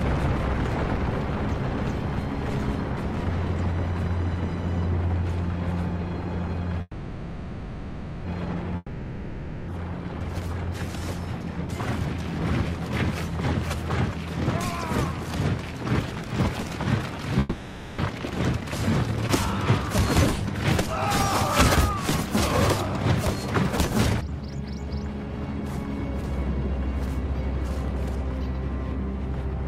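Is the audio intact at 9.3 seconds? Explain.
No. At 9.3 seconds the clip is inside a gap from 8.76 to 9.70 s, most likely a long network dropout. About 0.92 s of audio is missing, and the receiver fills nearly all of that stretch by extending the last sound it had, so what you hear is a synthetic buzz or hiss that fades rather than the original material. A brief silence of about 10 ms follows before the audio resumes, with the missing portion skipped.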